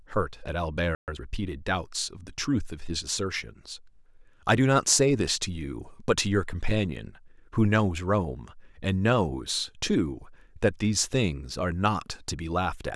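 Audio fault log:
0.95–1.08 s, playback stall. The speech cuts off in mid-flow and the output drops to silence for about 0.13 s. It simply freezes, then picks up again where it stopped. The gap most likely comes from the player running short of buffered data, or from its audio thread being held up, so no samples reached the output until it recovered.
1.08–1.20 s, time-compressed catch-up. Right after the stall, the speech rushes forward at twice normal speed for about 0.12 s. The pitch stays where it was, so it sounds hurried rather than squeaky. The player is working off the backlog that built up during the silence. It does this by dropping short slices and cross-fading across the joins.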